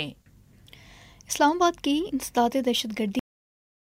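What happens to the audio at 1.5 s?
Nothing goes wrong at 1.5 s: the audio runs through that moment intact, with no dropout, click or other fault to be heard.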